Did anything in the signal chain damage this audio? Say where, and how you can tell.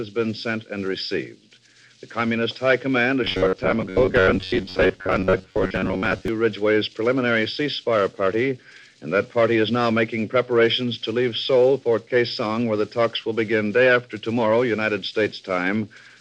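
Yes. From 3.24 to 6.28 s the sound turns into a rigid, metallic buzz with a fixed pitch near 94 Hz. This is robotic sound from repeated short buffers, likely at the driver or buffer stage. About half the signal appears to be replayed ~10.7 ms chunks.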